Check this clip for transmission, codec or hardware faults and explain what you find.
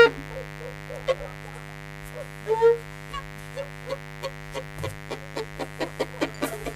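A mains buzz runs under the music for the whole clip. Sharp 50 Hz switching spikes spread harmonics into the kilohertz range, giving a raspy edge, unlike smooth hum, sitting clearly audible beneath the music.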